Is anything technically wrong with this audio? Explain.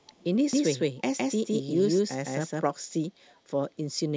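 Yes, the speech carries two kinds of fault.

Echo leak, from 0.02 to 0.24 s and again from 3.27 to 3.40 s: a far-end loudspeaker's echo canceller likely left residue that was sent back. The result is a very faint copy of the speech trailing 379 ms behind, heard as brief scraps.

Doubled audio track, from 0.53 to 2.63 s: the same audio was likely mixed in twice, with a second path running late. A full-band copy follows about 150 ms behind at roughly the same level, dry and without room colour, starting and stopping abruptly.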